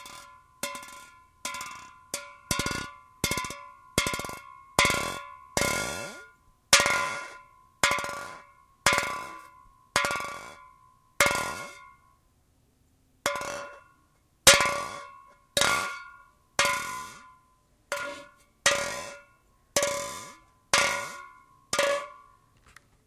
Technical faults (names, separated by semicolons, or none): none